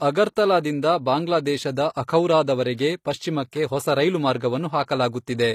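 All the way through, the speech has plainly audible HE-AAC compression artefacts, likely from an HE-AAC encode around 24 kbps: treble rebuilt by band replication up to about 20.3 kHz, with gritty, lispy s sounds.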